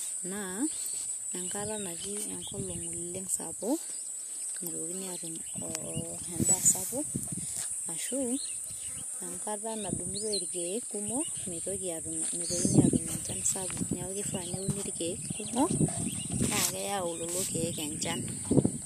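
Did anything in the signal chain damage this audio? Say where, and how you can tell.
No, nothing along the chain seems to have left a mark on this speech recording; there's nothing here that points to trouble at any stage.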